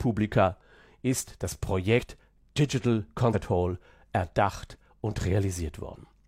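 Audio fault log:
1.95–2.00 s, 3.30–3.35 s and 5.90–5.96 s: compressed frames skipped. Just after "ist das", and again at the later two points, the speech lurches forward, losing about a tenth of a second at the first two and about half that at the last. The jump sizes fit whole frames of roughly 46 ms.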